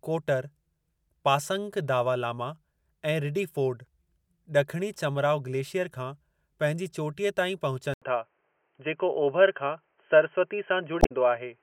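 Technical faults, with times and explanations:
7.94 to 11.62 s, input switched to a poorer device: after an 80 ms silence the speech turns dull and boxy, with nothing above 3.2 kHz, a small level shift and faint new background noise, likely from recording moving to a narrower-band microphone or headset profile.
10.99 to 11.12 s, damaged data in a compressed stream: a brief glitch cuts through the speech because corrupted bytes in the encoded stream make the decoder misread those frames, lose sync and hunt for the next valid frame header before playback recovers.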